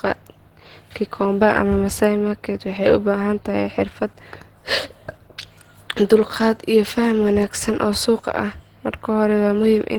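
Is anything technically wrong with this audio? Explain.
Yes. Across the whole speech clip there is plainly audible Opus compression. The sound is rough and grainy, with a hoarse, muffled edge on the lower part of the spectrum. This is likely a low-rate Opus encoder working in its hybrid mode. That mode uses a speech coder for the low band and fills the upper bands from a small bit budget. The texture points to a rate near 16 kbps. The top still reaches about 20.1 kHz.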